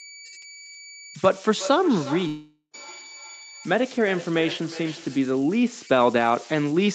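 A whistle near 2 kHz runs through the whole speech clip, about 18 dB below the speech, with grainy noise under quiet passages. These are converter idle tones: a delta-sigma converter without dither settles into repeating bit patterns on small inputs, and those patterns sound as tones.

From 1.03 s to 5.34 s each phrase returns roughly every 0.4 s, thinner and more ringing with each pass, the loudest repeat about 15 dB below the speech. This is feedback echo between two devices: one device plays the other's call audio, and that microphone picks it up again. Neither echo canceller can remove sound it did not play itself.

From 2.27 s to 2.75 s the speech gives way to a buzzy continuation of the last sound that fades to about 0.1 s of silence, then resumes further on with the intervening audio gone. That is the likely result of a long network dropout, with the receiver filling 460 ms of missing audio on its own.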